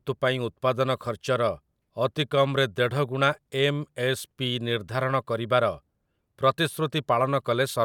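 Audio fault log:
Nothing to log here, as the speech comes through without any technical faults to flag.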